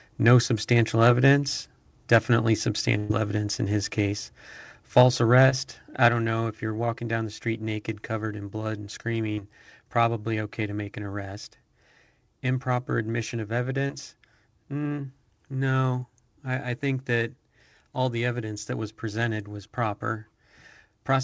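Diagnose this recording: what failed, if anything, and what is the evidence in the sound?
At 2.98 to 3.11 s, just before "evidence in his case", the sound freezes into a held, fading sound and then jumps ahead. This is a burst of packet loss on the network: about 120 ms never arrived and was filled by extending the last audio.

From 4.97 to 5.02 s the loudest syllable turns harsh and crackly. This is microphone overload at the converter, likely from input gain about 2 dB too high, which flattened the peaks.

The level drops abruptly at 5.02 s by about 3 dB, right after that distorted peak, and again at 6.09 s by about 5 dB, before "don't know if you're". This is microphone volume stepped down, likely by the call software's gain control lowering the device input.

Brief smears or wobbles occur at 5.49 to 5.53 s, at 9.33 to 9.39 s between "covered in blood and" and "probably okay to make", and at 13.87 to 13.91 s. 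These are short concealed packet losses, where 20 to 40 ms was synthesised from the preceding sound. The band-limited tone, with nothing above 8 kHz, fits the G.722 call codec.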